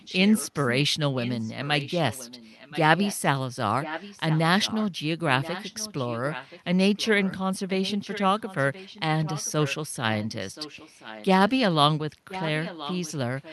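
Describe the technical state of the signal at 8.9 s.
An echo leak runs from 7.68 to 9.75 s. One side's echo canceller likely let its loudspeaker playback through, so the speech returns 1.03 s later, around 15 dB quieter.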